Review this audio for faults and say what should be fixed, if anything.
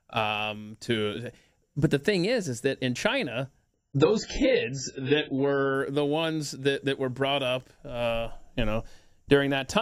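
From 3.75 to 5.75 s the adaptive stream drops to a lower bitrate. Quality changes abruptly with no gap, codec artefacts increase and nothing survives above 7.6 kHz, which fits a step from about 96 to 12 kbit/s. A larger client buffer or a bitrate floor prevents this.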